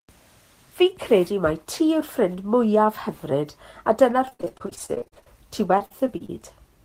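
Packets went missing again and again from 4.21 to 5.28 s and from 5.78 to 6.30 s, a repeated packet loss with the last sound stretched over each hole, gaps up to 61 ms, leaving choppy speech with fragments dropped, heavier in the first stretch.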